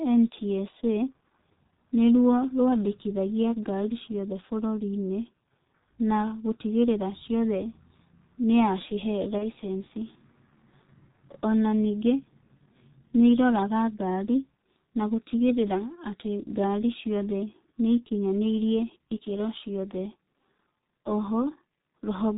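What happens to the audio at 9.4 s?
A single packet went missing around 9.38 s, and the G.723.1 decoder concealed the gap by extrapolating from its last pitch and filter state. The speech turns into a brief buzzy or noisy sound that fades, with weakness lingering until about 9.46 s, which fits one 30 ms frame lost.

Underneath, the whole clip runs through the G.723.1 codec at 6.3 kbit/s, which discards everything above 4 kHz and updates its voice model slowly. The speech sounds heavily muffled and hoarse, with smeared consonants.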